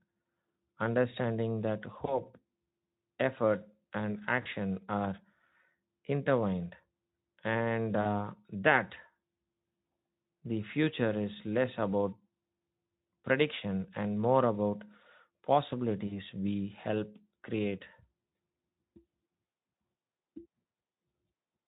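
A speech recording with four brief dropouts where the sound smears into a fading buzzy tone or coloured noise, at 2.05–2.22 s, 4.41–4.47 s, 8.01–8.09 s and 16.07–16.19 s. This is VoIP packet loss concealed by the speech codec, which bridged gaps of about 20 ms and then 40 ms by extrapolating. The Speex coding throughout adds only light hoarseness, consistent with roughly 15 kbps.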